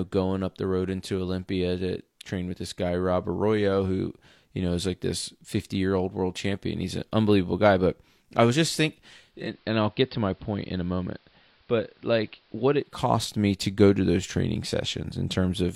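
Digital radio blending to analogue, 9.18 to 13.16 s: it cross-fades to AM, about 6 dB quieter, and faint hiss.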